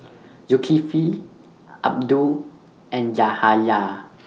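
Nothing stood out on listening to this speech clip, which has come through a WebRTC call path.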